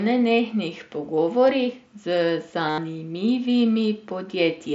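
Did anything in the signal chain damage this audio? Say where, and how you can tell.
Yes. Concealed Bluetooth headset packet loss in the wireless link between headset and phone, from 2.69 to 2.78 s. About 90 ms of audio went missing, and the receiver filled the gap by repeating the best-matching stretch of the previous 20 ms or so. The result is a buzzy tone held at full level, with a slight warble as real speech resumes.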